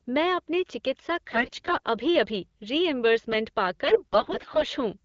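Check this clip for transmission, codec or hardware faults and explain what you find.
There are two bursts of AMR bit errors in this speech clip, heard against the band-limited but clear sound of wideband AMR-WB coding.

AMR bit errors: from 1.31 to 1.86 s, right after "मैं अपने चिकित्सा", and from 3.84 to 4.66 s, after "अभी रीइंबर्समेंट पा". The flipped bits land in the weakly protected parts of the frames, so excitation pulses are misplaced and the fine gain, pitch and spectral values are wrong. The error rate is around 15 percent in the first burst and around 10 percent in the second. Pitch and level roughly hold, but the voice turns hoarse, scratchy and gargly.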